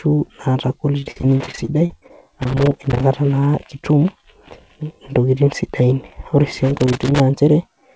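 In this speech clip, repeated packet loss (robotic sound) runs from 1.0 to 2.12 s. Over roughly a dozen short dropouts, the longest 42 ms, packets arrived late or not at all, and the receiver patched each hole by stretching the last bit of sound. About a quarter of that stretch is synthesized fill, so the speech turns choppy, with fragments missing between the repeats. The call path also carries its own limit: nothing is heard above 8 kHz, which fits G.722 running at 64 kbps. Separately, loose connector crackle appears from 2.42 to 3.03 s and again from 6.77 to 7.2 s, the second burst starting right after "ore si". A worn or dirty contact is making and breaking as it shifts, chopping the signal in rapid, uneven bursts. The result is an irregular scratching crackle laid over the speech.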